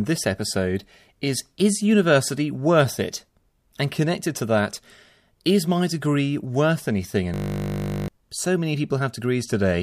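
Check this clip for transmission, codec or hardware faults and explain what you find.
One hardware-level fault is present, a system hang loop from 7.34 to 8.08 s in the speech. The computer or driver stalled while the audio device kept replaying its ring buffer, so a 20 ms fragment repeats dozens of times. At 50 Hz that repetition becomes a steady buzz, replacing roughly 0.7 s of speech.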